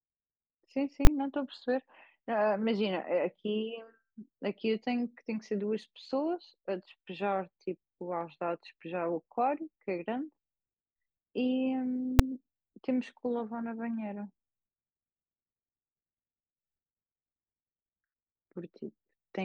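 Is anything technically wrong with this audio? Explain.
Yes. Invalid numbers at full scale strike twice in this speech. A calculation produced invalid values that were pinned at maximum level. A 20 ms block from 1.05 to 1.07 s and a 5 ms block at 12.19 s each land as one sharp, very loud bang.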